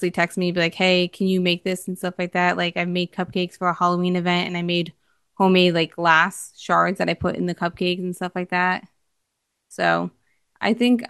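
No technical faults can be heard anywhere in this recording.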